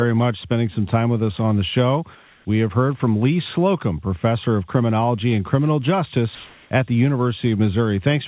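From 2.15 to 2.45 s and 6.35 to 6.71 s, the real background gives way to flat, featureless comfort noise, likely discontinuous transmission filling the pauses.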